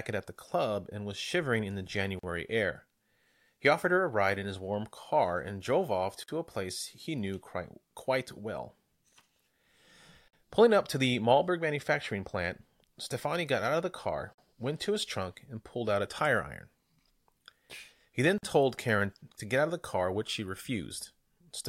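A speech recording that drops out briefly every 4 seconds, at 2.19, 6.23, 10.28, 14.33 and 18.38 s. These are gaps at joins of encoded pieces: separately encoded 4-second segments were spliced without trimming encoder delay and last-frame padding. The first gap, after "was shivering in the", lasts 42 ms, and the rest last 49 ms, including one between "car and drove off" and "a place he knew". On a waveform each shows as a flat notch with steep, slightly smeared edges. On a spectrogram it appears as a thin full-height blank column, with speech resuming unchanged.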